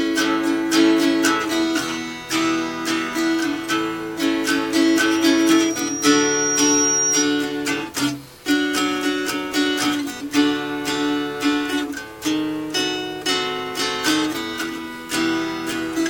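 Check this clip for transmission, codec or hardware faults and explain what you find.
One hardware fault is present: loudspeaker feedback squeal. From 4.83 to 7.27 s a pure tone near 5.7 kHz swells over about two seconds until it sits a few decibels above the sound. A microphone is hearing its own loudspeaker, and around 5.7 kHz the loop gain exceeds one, so that frequency keeps feeding itself.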